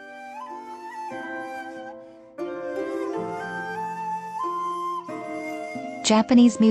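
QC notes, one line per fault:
0.74 s, DAB burbling: a few short watery blips where bit errors slipped past error correction into the MP2 data, putting short blips of noise into single sub-bands. On a spectrogram it shows as isolated bright narrow-band blocks.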